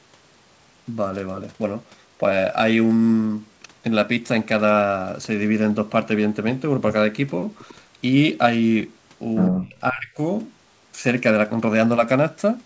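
At 7.68 to 7.75 s a very faint copy of the speech trails it by 99 ms. This is likely an echo leak: a single delayed repeat, unlike reverb's smooth, spreading tail. From 9.5 to 10.18 s the speech dips deeply for about half a second in total, likely speech suppressed in double talk. Unlike echo, this removes sound rather than adding any.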